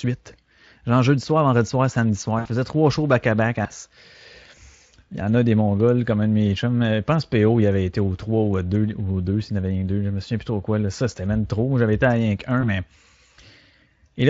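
At 2.39 s the speech breaks into VoIP packet loss concealed by the speech codec. About 60 ms of audio went missing, which fits three lost frames. The decoder filled the gap by repeating its last pitch and spectral shape at falling gain, so the sound smears into a short buzzy tone or coloured noise that fades until about 2.49 s. It stays weak just after that, because each rebuilt frame leans on the one before. On a spectrogram this shows as smeared energy stretched across the gap and dimming toward the right. The waveform shows a repetitive envelope that tapers. A second, briefer dropout at 12.61 s, around 20 ms or a single frame, leaves a small glitch of the same kind through 12.65 s. It looks like a thin smeared slice rather than a clean cut. The Speex codec underneath is at a high setting, about 24 kbps, with only light coding roughness.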